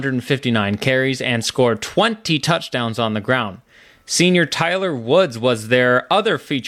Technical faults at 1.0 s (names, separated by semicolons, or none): none